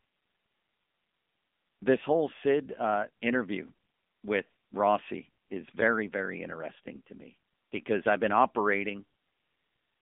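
Throughout, an AMR narrowband mobile codec squeezes the speech into 200 Hz to 3.5 kHz, and its plainly buzzy, synthetic texture fits about 7.95 kbps.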